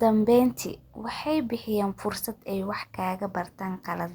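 No technical faults can be heard anywhere in this speech recording. There is nothing to place on the timeline and no problem to explain.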